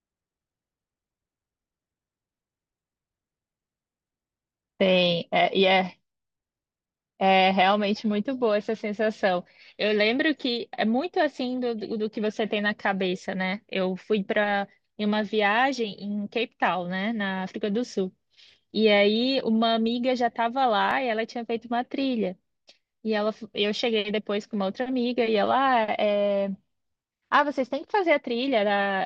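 At 20.91 s the speech jumps forward. There is no gap of silence. The sound simply skips a few milliseconds and the two sides meet directly, so the waveform breaks at the join. The likely cause is a dropped buffer (overrun). The program did not collect its samples in time. The hardware then overwrote that stretch, and it was lost.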